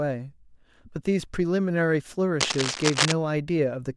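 From 2.40 s to 3.13 s, cable scratch noise runs over the speech: a dense, uneven crackle and rustle, roughly as loud as the speech itself. The likely cause is a worn cable, connector or control being moved, so its contact resistance flickers and injects noise bursts. On a spectrogram this shows as ragged broadband vertical streaks across that span; the waveform gains irregular spiky bursts riding on top of the speech envelope.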